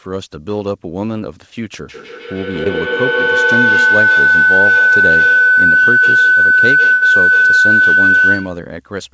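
From 1.89 s to about 8.76 s a feedback howl takes over. Two devices in the same room are on the call, so the sound leaves one loudspeaker, enters the other microphone and returns louder each time. Unlike an echo, whose repeats fade, this one grows and narrows to a tone around 1.5 kHz, with the loop repeating roughly every 150 ms, and peaks about 9 dB above the speech. It continues until the loop is broken near the end of the clip.

Between 2.64 and 2.67 s, underneath the howl, there is a short concealed packet loss. About 20 ms of audio never arrived in time, and the receiver covered roughly 14 ms of it by extending the preceding sound before blending back into the real signal. It is heard as a brief smear or wobble rather than a held tone, which distinguishes it from the longer loss later.

From 6.93 to 7.03 s a burst of packet loss removes about 80 ms of audio, and the receiver fills the whole gap. 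It extends the last sound and lowers its level as the gap continues, so a voiced sound becomes a held buzz that fades, or other sound a dying hiss. Playback then resumes further on with that stretch missing. The sustained, fading fill and the jump afterwards set it apart from the quick smear at 2.64 s.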